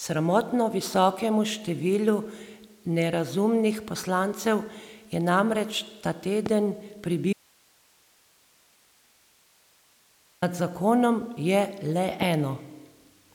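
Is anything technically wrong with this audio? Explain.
Yes, there are two kinds of fault in this speech recording.

A loud pop lands at 6.46 to 6.48 s, just after "poslancev je namreč ta", and another at 12.22 to 12.24 s. Each is a single sharp crack about 15 dB above the speech, which continues underneath. The likely cause is a brief voltage spike from a plug, switch, static discharge or driver glitch entering the signal path.

An audio dropout to a faint residue runs from 7.33 to 10.42 s, about 3.1 s. The speech cuts off abruptly and returns just as suddenly, and in between there is only hiss about 35 dB below the speech. The signal was likely lost upstream while the rest of the chain stayed live and kept passing its own noise.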